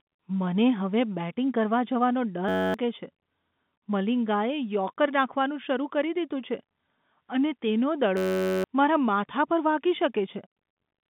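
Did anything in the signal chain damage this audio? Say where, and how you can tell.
Yes. A system hang loop at the driver/buffer stage: from 2.49 to 2.74 s and 8.17 to 8.64 s, a 10.67 ms fragment repeats as a steady 93.8 Hz buzz, which fits a 512-sample ring buffer.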